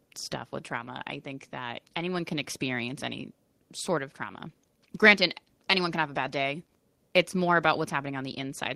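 No technical faults are audible anywhere in the recording.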